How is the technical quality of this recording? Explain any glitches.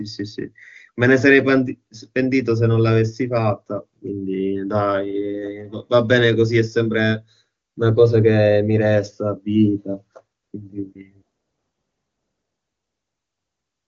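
The technical quality of this recording is good, and there are no glitches to explain.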